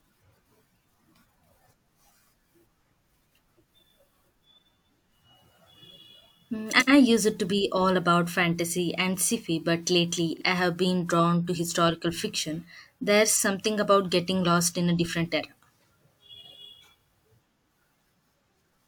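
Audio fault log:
6.70–6.90 s, 10.33–10.44 s: frames out of order. Neighbouring 85 ms, then 43 ms, blocks play swapped, giving a garbled flutter, just before "used to be all" and "I have been drawn".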